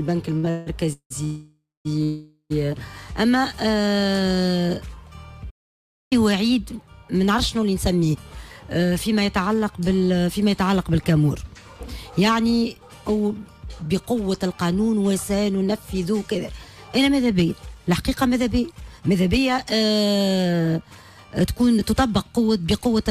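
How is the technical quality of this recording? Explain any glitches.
The recording has clear network and playback timing faults: stutter and freezes in the first few seconds, a full stall near 5.5 s, and several stretches where the playback speed drifts. Neither the stutter nor the freezes removes any audio.

From 0.37 to 1.12 s there are repeated stalls (stutter). Packets reached the receiver more slowly than they were played, so its jitter buffer ran dry four times. Each time it stretched the last sound to fill the gap. The concealment totals 410 ms, about 55% of that span, and the longest gap is 179 ms. The audio stumbles and drags there. On a spectrogram you would see four smeared, repeated patches breaking up the normal texture.

Two call audio freezes follow, from 1.24 to 1.87 s and from 2.03 to 2.52 s. The likely cause is packets held up in transit, which emptied the buffer. The receiver continued the last sound as a fading buzz or hiss, which in the first freeze decays into 230 ms of silence and in the second into 80 ms. 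Afterwards the audio resumes where it stopped, so 606 ms and then 472 ms of delay are added. On a waveform each freeze looks like a tapering tail ending in a flat stretch.

A playback stall runs from 5.50 to 6.13 s. The sound cuts off mid-flow for about 610 ms and then carries on, likely because the player ran out of data or its thread was blocked. A waveform shows an abrupt flat gap with hard edges. A spectrogram shows a clean vertical blank band with no decaying tail, which distinguishes it from the freezes.

From 9.43 to 9.89 s there is a jitter buffer slow-down. The receiver repeated single pitch periods to rebuild its reserve, inserting 85 ms in total. The audio plays at 83% speed with unchanged pitch, so sounds become drawn out. On a spectrogram the harmonics stay at the same height but stretch horizontally, with small repeated ripples.

Jitter buffer speed-up happens from 13.82 to 14.53 s at 109% speed, trimming around 70 ms, and again from 18.71 to 21.93 s at 110%, trimming around 300 ms. 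The buffer held more audio than its target, so the receiver cut out short pitch-period slices to reduce the delay. The audio sounds hurried but keeps its pitch. On a spectrogram the features are compressed in time, with tiny seams where pieces were removed.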